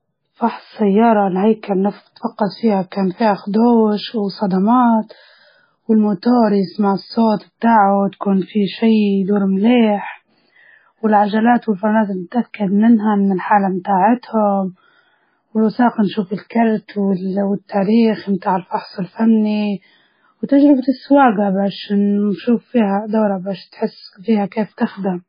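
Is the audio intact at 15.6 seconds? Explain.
No. At 15.6 s, as throughout the clip, the speech carries heavy MP3 compression artefacts, likely from a very low bitrate near 17 kbps. The encoder has cut everything above 5 kHz and drops weak frequency lines frame to frame, so the sound is dull, watery and swirling, with smeared attacks.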